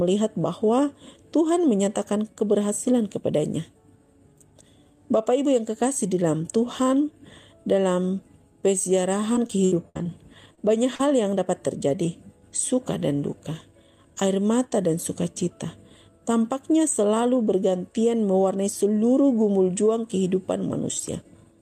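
From 9.33 to 10.07 s the sound turns choppy and robotic. This is repeated packet loss: six gaps, totalling 200 ms, each patched by extending the preceding sound.

Brief smears follow at 10.55 to 10.59 s and 10.95 to 11.01 s. These are short concealed packet losses: 20 ms and 40 ms went missing, and the receiver filled each hole by continuing the last sound.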